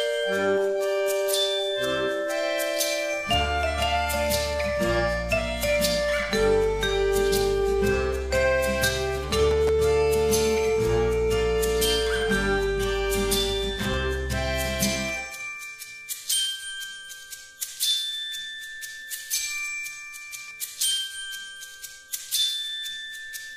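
Two short, irregular bursts of crackle and scratching break through the sound, the first from 9.51 to 9.69 s and the second from 13.79 to 13.94 s, each lasting under a fifth of a second. This is loose connector crackle: a worn or dirty contact in the signal path briefly lost and regained connection, chopping the audio on and off in rapid succession, with any DC present on the line adding pops at each break.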